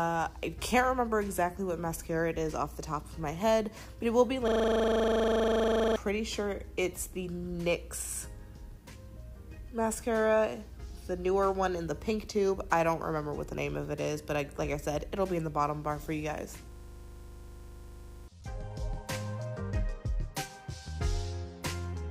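At 4.48 s and again at 16.72 s, a system hang loop takes over. The system froze while the hardware kept replaying one 40 ms slice. Each gives about a second and a half of rasping 25 Hz buzz, and that audio is lost.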